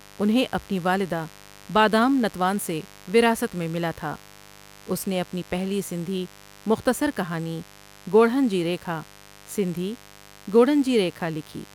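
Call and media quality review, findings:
Mains buzz, present throughout the speech clip. Steady raspy buzz, roughly 25 dB below the speech, 50 Hz mains. Probable component: dimmer, rectifier or unshielded cable on the capture path. Sharp switching spikes twice per cycle load harmonics up into the kilohertz range. Distinguished from plain hum by the bright, edgy texture. A pure 50 Hz hum is a dull low tone, while this buzz carries rasp well above the fundamental.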